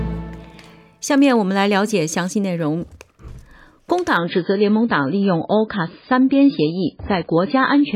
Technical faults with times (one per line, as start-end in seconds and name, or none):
4.17-7.95 adaptive stream at a lower bitrate